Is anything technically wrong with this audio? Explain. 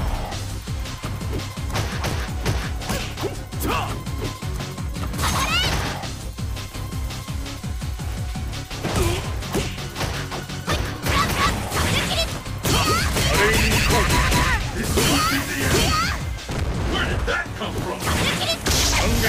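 Yes. At 2.11 s the sound jumps abruptly forward, with no gap of silence. A few milliseconds of audio are simply missing, and the two edges meet with a discontinuity in the waveform. This is most likely a dropped buffer (overrun): the capturing software fell behind, the hardware overwrote a block of samples before it was read, and the recording was spliced straight across the hole.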